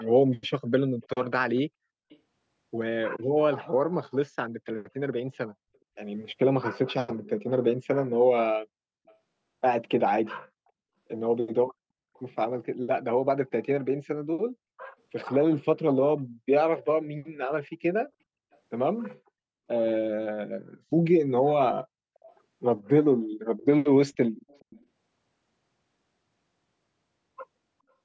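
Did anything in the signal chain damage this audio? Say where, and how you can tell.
Yes. Echo leak, in the call processing stage. A faint copy of the speech returns 424 ms late at 0.0–0.05, 1.02–2.19, 9.07–9.15, 12.14–12.22, 18.52–18.58, 22.15–22.33 and 23.57–24.85 s. It is loudest near 24 s. The likely cause is a speakerphone echo the canceller missed.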